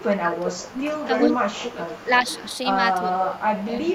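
A short speech recording with two interleaved faults. Speech suppressed in double talk appears from 0.01 to 1.5 s, 1.73 to 2.1 s, 3.03 to 3.17 s and 3.65 s to the end. The voice dips, by about 20 dB at worst in the first stretch, and loses its top end or breaks into pieces. The likely cause is an echo canceller that could not separate the near talker from loudspeaker echo while both sides spoke, so it turned everything down. On a spectrogram these stretches show the upper bands thinning to dark gaps, and the waveform envelope sags or notches. Echo leak shows up from 0.75 to 1.73 s, 1.89 to 2.58 s and 3.18 to 3.64 s as a copy of the voice trailing about 0.39 s behind. In the first stretch it is roughly as loud as the direct speech, and later it is much fainter. It is likely caused by a speakerphone's canceller failing to remove what its microphone picked up and sending it back. The spectrogram shows the same harmonic patterns repeated at a fixed 0.39 s offset, and the waveform shows delayed ghost bursts in those stretches.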